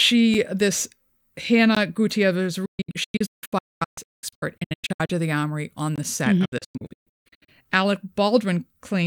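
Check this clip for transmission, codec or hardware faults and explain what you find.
Two transmission-side faults are present: three blocks of digital silence and two digital broadcast dropouts.

Blocks of digital silence occur at 0.34 s (about 5 ms, consistent with a 256-sample buffer), at 1.75 s (16 ms), and at 5.96 to 5.98 s (21 ms, consistent with a 1024-sample buffer), between "of the armory on" and "the set". In each case the output buffer was likely not filled in time, so zeros were played. The hard edges produce a tick on the shortest gap and a brief hole on the longer two.

Digital broadcast dropouts run from 2.65 to 5.10 s, ending just before "of the armory on", and from 6.45 to 7.49 s. Corrupted frames were muted until good frames resumed, with 8 ms fades at each edge. The first dropout loses about 1.5 s of sound in scattered holes, the longest 224 ms. The second loses about 0.7 s, the longest hole 160 ms.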